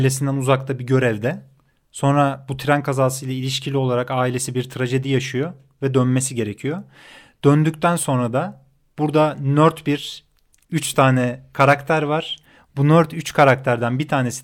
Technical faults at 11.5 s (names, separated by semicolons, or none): adaptive stream at a lower bitrate